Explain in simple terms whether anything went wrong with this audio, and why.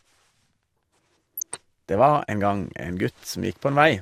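Between 1.37 and 1.56 seconds the speech gets a short burst of noisy blips. That's DAB burbling: weak digital radio reception let a small fraction of bit errors slip past error correction, so bits of the sound briefly jump to wrong levels.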